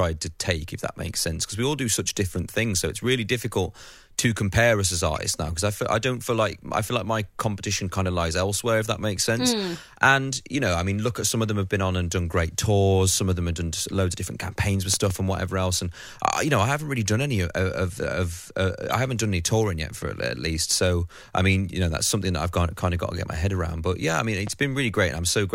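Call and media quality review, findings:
Corrupt frame decoded, 5.16–5.18 s. Short chirp-like blip peaking around -25 dBFS, about one frame long. Probable component: decoder. Damaged bits in one compressed frame decoded anyway; misread gains and codes put energy at wrong frequencies.

Corrupt frame decoded, 18.90–18.93 s, after "of of of uh", before "I haven't done any". Squeaky burst around -25 dBFS spanning roughly two frames. Same mechanism: flipped bits decoded as spectral content.

Loud pop, 14.94–15.13 s, after "of different campaigns with", before "and whatever else". Two sharp pops roughly 10 dB above the speech, which continues underneath. Likely cause: voltage step from plug, switch or static, shaped downstream.

Loud pop, 24.47–24.50 s, after "yeah I mean". Single pop about 5 dB over the speech. Likely cause: driver glitch or electrical transient injecting a pulse into the signal path.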